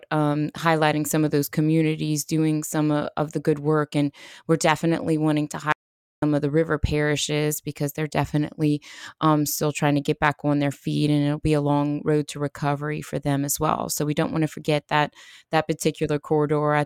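At 5.72 s, right after "we're definitely wanting to", the speech cuts off abruptly in an audio dropout to silence lasting about 0.50 s, and resumes mid-flow at 6.22 s with "of the river parishes". The gap is silent with no room tone. The likely cause is the input signal being lost while recording kept writing zeros, so whatever was spoken there is gone. A waveform shows a flat line, and a spectrogram shows a dark vertical band.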